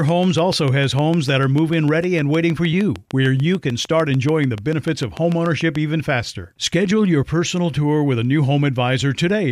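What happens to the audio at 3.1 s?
At 3.1 s the speech sits under a steady ticking, part of a train of clicks that runs from about 0.09 s to 5.77 s, ending just before "even faster". Some forty similar pops arrive at an even 6.7 per second, standing out above the speech and continuing through the pauses. The likely cause is a repeating electrical pulse getting into the signal path, from interference by nearby equipment or from a faulty connection or power supply.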